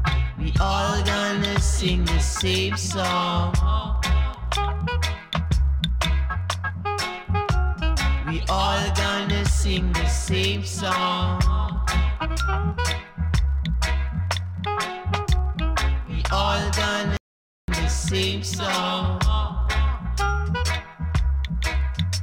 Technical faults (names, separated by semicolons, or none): playback stall